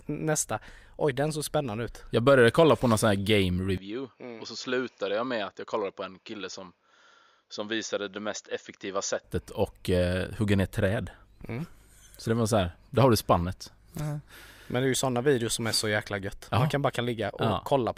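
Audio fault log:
3.78–9.24 s, input switched to a poorer device: the sound abruptly turns duller and boxier, with nothing above about 7.1 kHz, drops roughly 5 dB in level, and carries a faint new noise floor well below the signal. At 9.24 s the full band returns. There is no gap at either switch. The likely cause is a change of capture device. A plain filter or codec bandwidth drop would not also shift level and background noise at the same instants.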